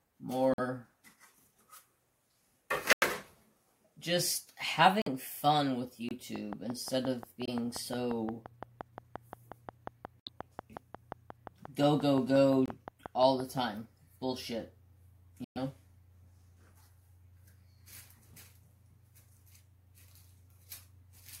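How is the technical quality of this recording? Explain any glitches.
The recording has two kinds of glitches: repeated brief dropouts and a stretch of steady ticking.

Corrupt frames muted: at 0.54, 2.93, 5.02, 6.09, 7.46, 10.20, 12.66 and 15.44 s, the sound cuts abruptly to silence for about 35 to 130 ms. Damaged compressed frames were rejected by the decoder and replaced with silence, so timing stays intact. These are holes, not added noise.

Train of clicks: from 6.36 to 13.59 s, about forty similar pulses arrive at a regular 5.7 per second, roughly 10 dB above the programme, ticking even through the gaps. This is likely interference from nearby equipment or a faulty connection or power supply. Unlike the mutes, it adds sound rather than removing it.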